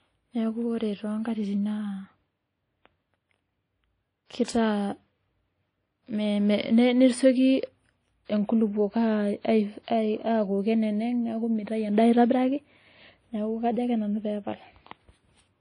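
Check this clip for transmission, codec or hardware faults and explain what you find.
Two codec problems stand out in the speech: a steady lossy-coding character across the whole clip, and two short pre-echoes.

Throughout, the speech sounds ringing and washy, with hiss that swells and fades with the signal and nothing above about 10.1 kHz. The likely cause is WMA compression at a low bitrate, around 32 kbps. Its long transform blocks smear quantisation noise over tens of milliseconds and discard weak detail.

From 4.26 to 4.30 s and again from 4.45 to 4.48 s, a short hiss arrives just before sharp onsets, blunting them. This is pre-echo: the transform block spreads noise meant for the loud attack backward into the quiet moment before it, reaching about 47 ms and 31 ms ahead.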